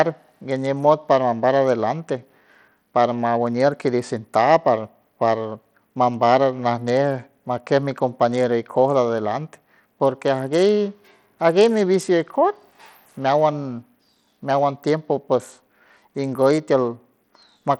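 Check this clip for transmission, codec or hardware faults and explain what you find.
There's one fault, and it runs the whole length of the speech. Throughout, you hear what sounds like Bluetooth SBC compression, likely an SBC link squeezed to a tight bit budget, something in the region of 80 kbps. The coarse sub-band coding starves the top bands, so the treble thins out and flickers, and a gritty, grainy edge rides on the speech.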